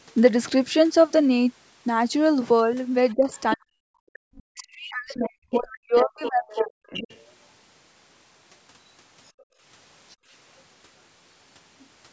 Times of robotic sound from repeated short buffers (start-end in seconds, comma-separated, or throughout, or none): none